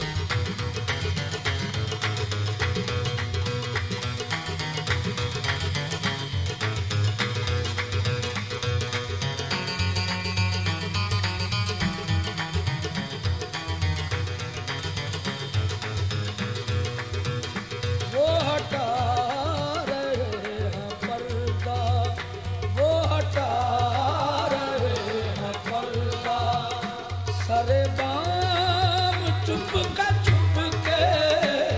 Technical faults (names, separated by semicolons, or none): none